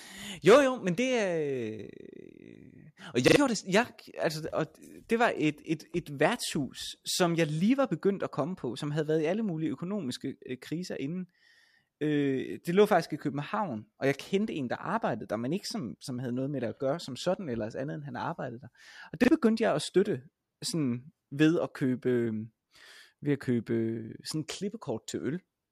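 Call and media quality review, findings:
Repeated buffer: stutters at 3.28 s (repeated twice, before "gjorde det") and 19.24 s (once, before "begyndte jeg at støtte"). Playout underrun, so the last chunk replays; fits a 40 ms buffer.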